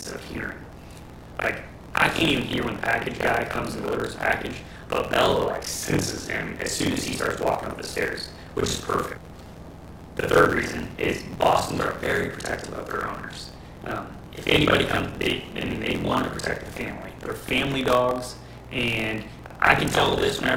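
A steady robotic buzz at about 43 Hz rattles through the whole clip whenever sound is present. This is buffer tearing: writer and reader have slipped within a ring buffer, so most of each period, which fits a 1024-sample buffer, replays audio about 50 ms old, with hard joins.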